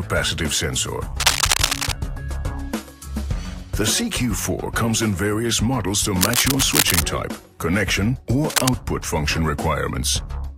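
Bursts of cable scratch noise show up from 1.20 to 1.92 s, 6.21 to 7.03 s and 8.50 to 8.70 s, each a dense, uneven scratching rustle about as loud as the sound itself. It's likely a worn cable or connector being moved.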